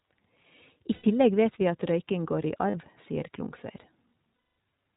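iLBC codec damage runs throughout: narrowband coding cuts everything above 4 kHz, leaving the speech plainly rough and synthetic, which fits the 15.2 kbps mode.

Lost iLBC frames occur at 0.94 to 1.05 s before "vet vi at røyking", at 2.70 to 2.75 s after "at røyking går i", and at 4.36 to 4.58 s. The decoder fills each gap by repeating the last pitch cycle mixed with noise, heard as a held, buzzy vowel. The longest gap, at 220 ms, fades as the concealment runs on. Because each frame stands alone, the speech recovers almost immediately after each gap.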